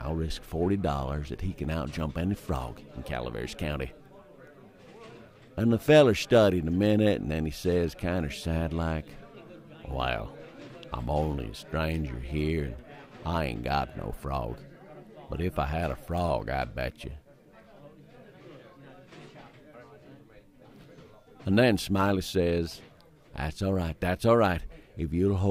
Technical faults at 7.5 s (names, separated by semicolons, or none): none